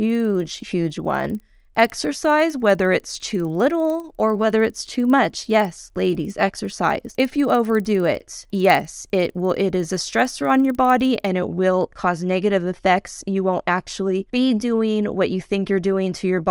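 From the start until 11.25 s, the speech carries a regular ticking at 20 per second that shows up only while sound is present. This is a resampler restarted on every block: the audio, likely upsampled from 24 kHz to 48 kHz, was converted in separate 50 ms pieces, so each block edge lacked its true neighbouring samples and picked up a small error.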